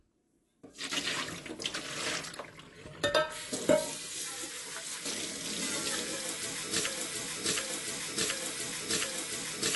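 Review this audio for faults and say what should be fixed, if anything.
AAC compression, throughout: nothing sounds above 11.5 kHz and the texture is plainly dull and fizzy, likely from AAC-LC quantising coarsely at a low bitrate, roughly 32 kbps.

Broken-record loop, from 6.87 s to the end: a 0.72 s fragment repeats back to back four times, likely a stalled player or stream resending its last buffer while the intended audio is lost.

Encode at a higher bitrate or losslessly, and check the playback or streaming chain for stalls so the missing tail can be recaptured.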